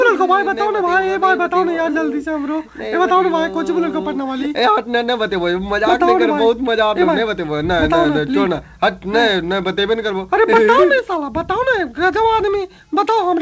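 No technical faults can be heard: the sound has passed through a call path whose wideband coding leaves nothing above 8 kHz, which fits G.722, and nothing in it departs from what that path normally delivers.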